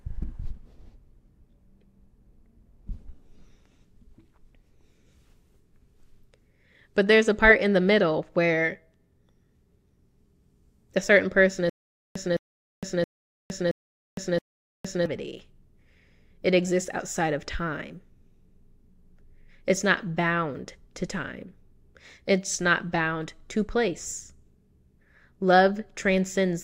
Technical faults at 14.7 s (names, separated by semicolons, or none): stutter with silent gaps